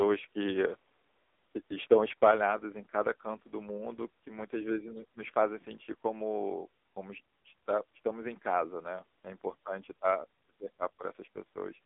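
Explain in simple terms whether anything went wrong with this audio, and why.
Throughout the clip, the speech has the muffled, boxy, buzzy sound of an old mobile phone call. This is the AMR narrowband mobile codec, squeezed hard. Nothing above about 3.8 kHz survives, so voices lose crispness. Unlike simple muffling, heavy compression also makes the voice sound synthetic and robotic.

From 2.23 to 2.31 s, the loudest moment has a harsh, crackly edge. This is microphone overload: the peaks were too strong and their tops got chopped flat, likely because the input was set too high. It is brief and gritty, not a change in loudness.

Right after, at 2.31 s, everything abruptly gets quieter and stays that way. This is the microphone volume stepped down, likely the call software reacting to the overload it just detected. Unlike the crackle, it adds no distortion. Both the voice and the background drop together in one step.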